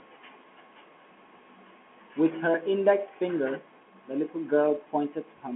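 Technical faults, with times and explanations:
Nothing's wrong with this one; it's simply speech heard down an ordinary telephone line, with nothing reaching above about 3.8 kHz.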